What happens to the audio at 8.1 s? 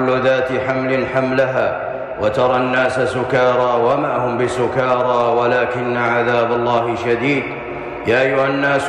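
Nothing goes wrong at 8.1 s; the audio carries on intact through that moment with no dropout, click or distortion.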